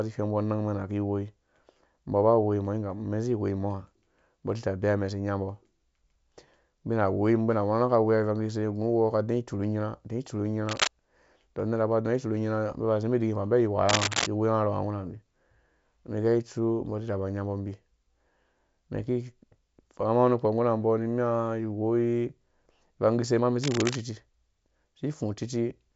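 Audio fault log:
10.66–10.91 s, 13.89–14.27 s and 23.62–23.96 s, cable scratch noise: three short bursts of dense, irregular scratching lie over the speech, each lasting a quarter to about two-fifths of a second. The first is about as loud as the speech, the second a little louder, and the third a little quieter. The likely cause is a worn cable, plug or connector being moved, so its contact resistance jumps about rapidly and adds uneven crackle to the signal.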